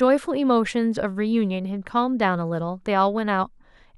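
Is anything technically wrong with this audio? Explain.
No, nothing technically wrong turns up anywhere in this speech recording.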